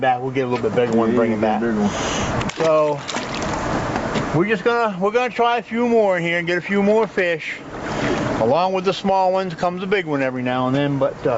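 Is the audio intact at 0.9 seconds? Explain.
No. At 0.9 seconds, as throughout the clip, there is gain pumping, with a level swing of around 25 dB, so loud and soft parts sit unnaturally close and the sound feels squashed. The likely cause is input gain set far too high, with a fast limiter or compressor pulling it back down on every peak. The band limit at 8 kHz comes from the call path and is not part of this fault.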